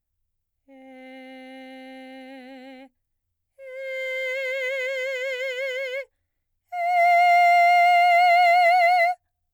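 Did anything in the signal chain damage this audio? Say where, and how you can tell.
Yes. A fine hiss and roughness rides on the music throughout, swelling on loud, bright passages: sample clock jitter at the converter, a few microseconds, leaving error roughly 35 dB down.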